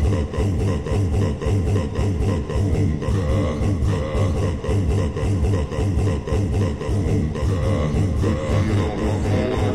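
From the start of the clip to its end, a doubled audio track runs alongside the sound: a second, full-band copy trails about 0.7 s behind, at roughly the same loudness as the original. It was likely captured twice, with one path arriving late. Unlike an echo or room reverb, the copy appears once, does not decay or repeat, and carries no added room colour, so it sounds like two identical takes out of step.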